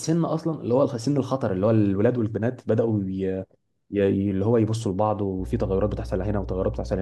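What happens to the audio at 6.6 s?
At 6.6 s the speech sits on top of mains hum, which runs from 5.37 s to the end of the clip. A ground loop or nearby transformer is leaking the 60 Hz power line into the signal, giving a steady low buzz that is fairly loud, not far beneath the speech. On a spectrogram it shows as a flat horizontal line at 60 Hz with fainter low harmonics above it. The waveform carries a constant low-frequency ripple, clearest in pauses.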